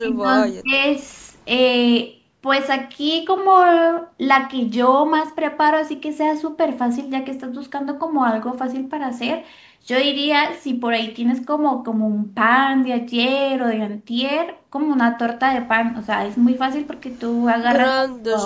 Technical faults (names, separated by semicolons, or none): speech suppressed in double talk; echo leak